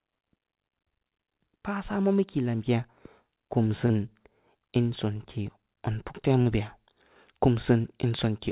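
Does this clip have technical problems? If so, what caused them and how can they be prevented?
Yes: short concealed packet loss at 3.86–3.92 s, 6.42–6.48 s and 7.82–7.86 s, where about 40, 40 and 20 ms of audio arrived too late. The receiver extended the preceding sound to cover each gap, leaving brief smeared wobbles in the speech, which is band-limited to 4 kHz, consistent with G.711 mu-law. A larger jitter buffer, forward error correction or a more stable network link would prevent these gaps.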